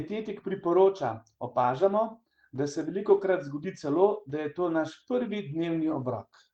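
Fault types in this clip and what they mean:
lost packet rebuilt from error correction: at 2.11 s, after "priporoča opažamo", and at 3.91 s, one 20 ms packet was replaced by the coarse copy in the next packet. Unlike concealment, there is no silence or smeared guess, only a short, rougher, noisier moment.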